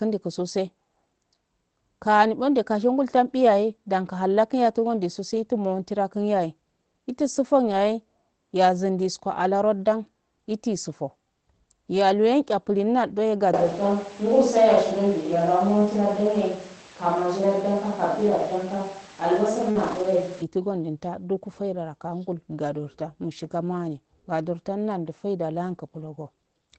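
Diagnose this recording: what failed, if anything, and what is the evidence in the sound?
Network stage, lost packet rebuilt from error correction: three stretches turn briefly rougher and noisier without any gap, at 7.67 to 7.73 s, 8.97 to 8.99 s and 19.75 to 20.05 s. Packets were lost, and the decoder played the low-bitrate copies carried in the following packets.

Capture stage, a switch to a distant microphone: from 13.54 s to 20.42 s the speech turns abruptly roomy and hollow, with thinner bass and background noise roughly 25 dB below it, though the level barely changes. The likely cause is a failed close microphone.

Network stage, short concealed packet loss: at 19.71 to 19.77 s there is a brief smear where about 40 ms of audio never arrived in time. The decoder extended the preceding sound to fill the hole, blending into the rebuilt frames that follow, all band-limited to 8 kHz by the Opus path.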